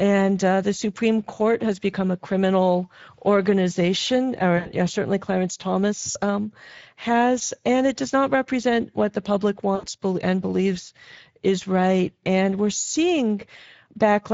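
Speex codec damage runs through the whole speech clip and is plainly audible. The speech has a hoarse, grainy roughness because this CELP coder has too few bits to describe the excitation signal in detail. The upper band sounds like a shaped noise fill rather than true detail. The degree of roughness fits a mid-quality setting of roughly 17 kbps.

VoIP packet loss concealed by the speech codec first appears at 4.57 to 4.70 s, between "become a criminal organization" and "yeah certainly". It happens again at 6.11 to 6.18 s, just before "um has and it", and at 9.75 to 9.87 s, between "represent what the public" and "and believes is right". At each gap the decoder stretches its last pitch and filter into a sound that fades. The gaps amount to about 80, 40 and 80 ms of missing audio, and the speech stays weak or distorted for a moment after each one.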